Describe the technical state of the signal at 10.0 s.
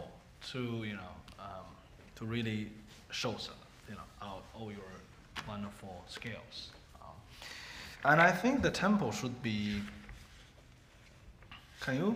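At 10.0 s the signal is intact, with no audible fault at that moment.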